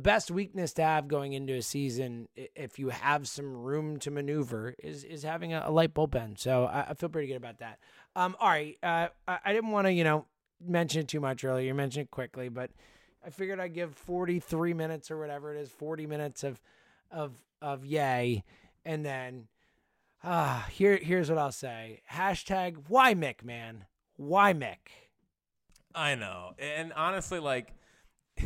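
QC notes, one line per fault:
No fault found.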